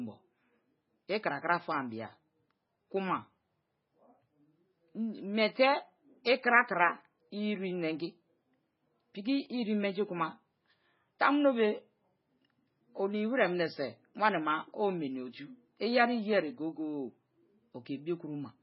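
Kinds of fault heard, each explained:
MP3 compression: The speech was likely squeezed through an MP3 encoder starved of bits, at a rate that fits roughly 16 kbps. To save data, the encoder discarded everything above 5.5 kHz, so the speech sounds dull and muffled throughout, with the crisp top of consonants gone. It also dropped quieter frequency detail that flickers in and out between frames, giving the heavily damaged sound a watery, swirling texture.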